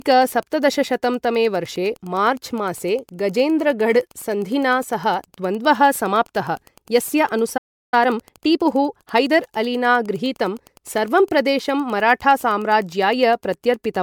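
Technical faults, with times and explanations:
throughout  Wi-Fi interference: a steady tick about ten times a second, every 102.4 ms, sits about 35 dB below the speech. A nearby Wi-Fi radio's beacon bursts are rectified by the audio circuit and leak in as clicks. Unlike mains hum or buzz, it is a train of separate, evenly spaced ticks rather than a continuous tone, and its rate follows the beacon timing, not the power line.
throughout  generation loss: the speech sounds swirly, hollow and smeared, with blurred consonant attacks. This is likely from MP3 at 128 kbit/s decoded and re-encoded around seven times. Each pass quantises again on a shifted frame grid, so noise and spectral holes pile up. A single encode at that bitrate would sound far cleaner.
7.57 to 7.94 s  playback stall: right after "समाप्तः यस्य" the speech stops dead for about 0.35 s, then continues from where it left off. 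The player likely ran short of data or was blocked and output silence until it recovered. Unlike a dropout in the recording itself, no material is lost. The stream simply pauses mid-flow and picks up again at the same point.
7.94 to 9.32 s  time-compressed catch-up: immediately after the stall, the speech runs hurried at 1.25 times normal speed until just before "अलिना गृहीतं सर्वं". The player is shedding its backlog by cutting out short pieces and cross-fading the joins. The pitch stays normal, which separates this from a tape or clock speed-up, where faster playback would also raise the pitch.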